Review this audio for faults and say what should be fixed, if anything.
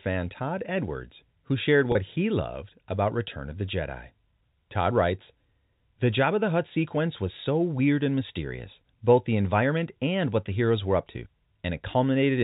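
There's one packet loss with pitch repetition at 1.92 to 1.95 s, right after "who shared" and just before "he loved about". About 30 ms of audio went missing, which fits a single dropped packet. The receiver papered over the hole by looping the last pitch period, so you hear a brief held, slightly buzzy tone instead of a gap. The G.711 telephone band and its faint hiss are just the line's normal character. To prevent it, add a jitter buffer or forward error correction on that network path.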